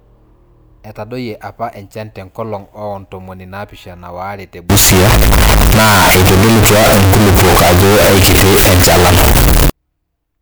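From 4.70 s to 9.70 s the speech turns suddenly very loud and harsh, near-square and at an almost fixed, high level, with background noise as loud as the voice, though pitch stays traceable. This is float read as integer, likely 32-bit float samples decoded as 32-bit integers.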